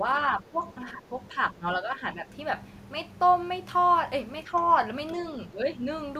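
Speech suppressed in double talk occurs in this speech clip at 0.37–0.61 s, 0.84–1.13 s, 1.29–2.29 s, 4.44–4.53 s and 5.48–5.67 s. The voice dips in level by around 10 dB in the first, second and last of these and by around 5 dB in the other two, about 1.2 seconds in all. The likely cause is an echo canceller that took this talker for loudspeaker echo while far-end audio was playing and turned both down together.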